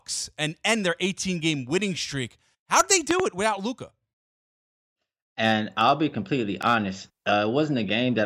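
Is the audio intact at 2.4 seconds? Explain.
Yes, at 2.4 seconds the speech plays through intact, with no audible dropout, click, distortion or other fault at that moment.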